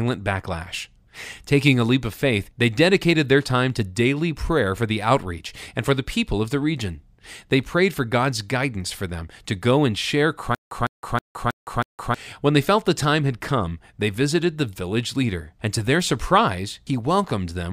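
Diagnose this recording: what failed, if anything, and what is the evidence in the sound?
A stutter with silent gaps interrupts the speech from 10.55 to 12.14 s, just after "to go and share". A fragment of about 155 ms plays, then digital silence of about 164 ms follows. The pair repeats five times at an even 319 ms period. The fault sits at playback or the stream buffer. The likely cause is a stall: each retry replayed the last fragment and then ran empty. The audio due in that span is lost.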